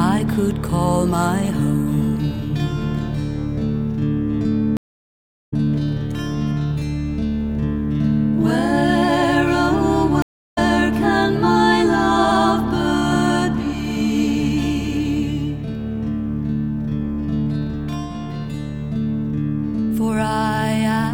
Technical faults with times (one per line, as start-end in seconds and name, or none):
4.77-5.54 stream reconnect
10.22-10.58 stream reconnect